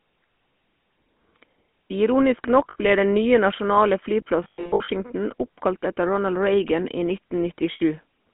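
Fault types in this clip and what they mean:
GSM full-rate codec: Throughout, the speech has the buzzy, gravelly roughness of the early GSM coder, consistent with 13 kbps full rate, inside a 200 Hz to 3.4 kHz phone band. That grit in the excitation, not just the narrow band, separates it from simple telephone filtering.
Lost GSM frames: At 2.70 s (60 ms, just before "ble den nye nasjonale"), 4.44 to 4.90 s (scattered losses right after that phrase, longest run roughly 100 ms) and 7.72 s (80 ms), sound freezes into a metallic ring rather than clean dropout silence.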